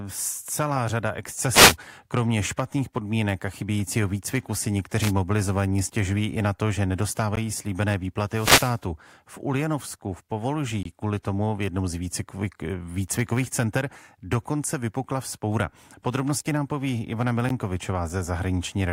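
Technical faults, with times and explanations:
1.51–1.76 s, wireless microphone noise hit: right after "celá řada" the FM radio link fades, receiver noise swells, and you get a quick burst of static over the speech.
4.24 s, block of digital silence: a 5.3 ms run of zeros, which fits a 256-sample buffer the software didn't fill in time. The hard edges make it a tick.
5.00–5.12 s, wireless microphone noise hit: a short swish of receiver static just before "mobilizovaní stěžují i na", as reflections briefly cancel the transmitter's signal.
7.36 s, block of digital silence: right after "i na to že" the output drops to zero for 16 ms and jumps back without a fade, so it pops.
8.30–8.79 s, wireless microphone noise hit: the longest fade, about half a second. The radio signal sinks and receiver noise rises into a burst of static.
10.83–10.85 s, block of digital silence: a 21 ms hole of silence, consistent with a missed 1024-sample buffer. 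It's a brief dropout.
17.49 s, block of digital silence: another buffer likely missed for 13.5 ms. The abrupt cut and return gives a short tick.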